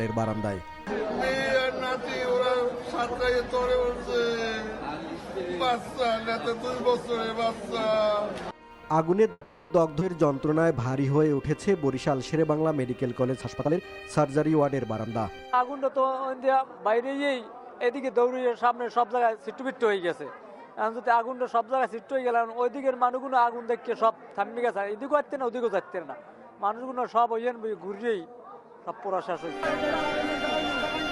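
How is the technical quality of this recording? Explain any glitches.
The recording has a cluster of network-style glitches between about 9 and 16 seconds.

From 9.31 to 9.72 s there's a call audio freeze. The last sound stretches into a fading buzz or hiss for about 390 ms, then resumes where it stopped, likely because packets stalled.

Right after, at 10.00–10.03 s, it skips ahead. Around a tenth of a second is dropped and the two sides are butted together almost seamlessly.

From 10.26 to 11.36 s a jitter buffer slow-down repeats pitch periods to rebuild its reserve. Playback runs at 89% speed, adding 124 ms, drawn out but same pitch.

Then 13.41–15.84 s is a jitter buffer speed-up. Short pitch-period chunks get trimmed, roughly 400 ms in total, so the audio runs at 116% and sounds hurried.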